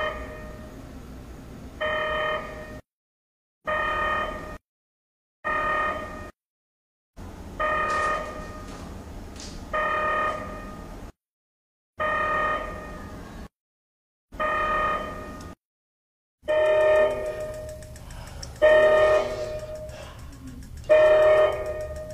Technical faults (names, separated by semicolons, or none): none